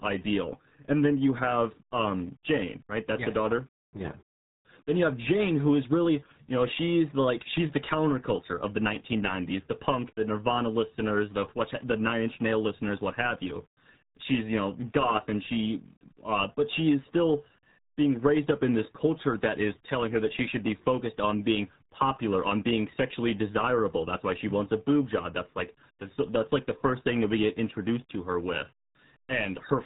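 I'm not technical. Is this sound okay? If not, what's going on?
No. From start to finish the speech has been squeezed through the RealAudio 14.4 codec, an old format built for dial-up modems. Nothing above about 3.8 kHz survives, so voices sound muffled, and the heavy compression adds a gargly, bubbling wobble to every syllable. That wobble is what sets it apart from an ordinary telephone line: a phone also sounds muffled, but it stays smooth rather than warbling.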